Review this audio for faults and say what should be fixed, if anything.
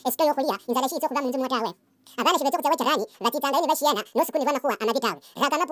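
The speech plays high and hurried for its whole length, running at twice its natural speed with every pitch raised a full octave, about 12 semitones. This is a wrong sample rate fault: the samples are being clocked out at double the rate they were captured at, with no conversion, which fits 16 kHz audio being played back at 32 kHz. Preventing it means resampling or matching the playback rate to the recording's declared rate.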